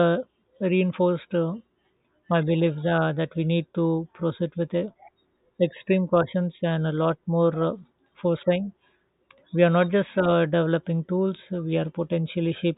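Nothing stood out as a technical fault on listening to the speech.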